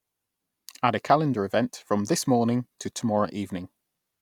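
A speech recording whose signal shows no audible technical fault anywhere.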